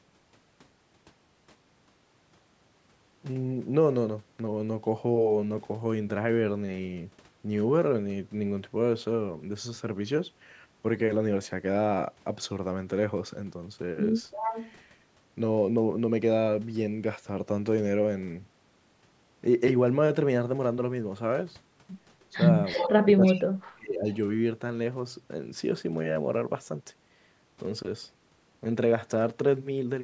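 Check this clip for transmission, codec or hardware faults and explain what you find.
Two call-path faults can be heard in this speech, both tied to echo cancellation.

Echo leak at 14.31–14.71 s, 22.68–22.93 s and 23.24–23.40 s: speech returns 324 ms late, about 10 dB down (about 20 dB in the last). It is likely loudspeaker pickup that the canceller missed.

Speech suppressed in double talk from 23.02 to 24.07 s: while both sides talk, the level dips by up to about 30 dB for roughly a second. The likely cause is the canceller turning down everything.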